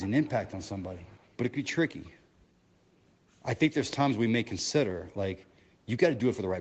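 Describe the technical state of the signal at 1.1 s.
At 1.1 s the speech carries an echo leak, which runs from the start of the clip to 1.37 s. A faint delayed copy of the voice trails the direct sound by about 234 ms. It sits far below the speech, roughly 30 dB down, so it is heard as a faint ghost rather than a clear repeat. The likely cause is a loudspeaker on the far end whose echo canceller let part of its microphone pickup through.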